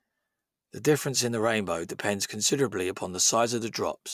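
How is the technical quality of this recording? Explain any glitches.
No technical faults can be heard in this speech recording. There are no glitches to explain at any point in the audio.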